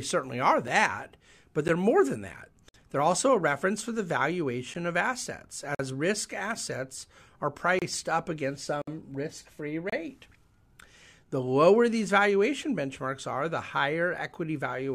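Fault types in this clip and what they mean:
Gap between stream segments: timestamps of successive 1-second segments leave short holes that the player fills with silence, so the speech cuts out abruptly for 6 to 58 ms on a one-second grid. These appear as blank vertical stripes on a spectrogram and flat silent notches in the waveform.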